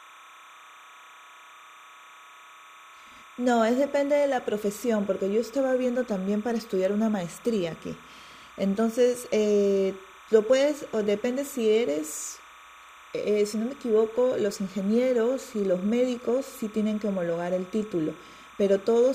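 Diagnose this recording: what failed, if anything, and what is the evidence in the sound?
A steady chirping warble sits behind the speech for the whole clip, roughly 25 dB below it, flipping between pitches near 1 and 2 kHz. This is timecode bleed in the analogue wiring: 30-frame linear timecode leaking from a neighbouring track or cable.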